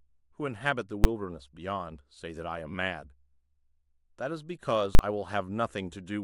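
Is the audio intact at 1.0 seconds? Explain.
No. At 1.04 s, invalid numbers at full scale pin a 10 ms block to one extreme value, giving one bang. It appears as a flat waveform slab beyond the speech peaks and a broadband vertical spectrogram stripe.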